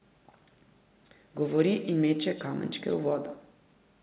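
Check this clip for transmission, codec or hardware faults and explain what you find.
One transmission fault runs through the whole speech clip: echo with no canceller. Each phrase is trailed by a thinner copy about 15 dB quieter, arriving roughly 150 ms later, because the far-end loudspeaker's output re-entered its microphone and returned uncancelled. The narrowband call codec also leaves nothing above 4 kHz.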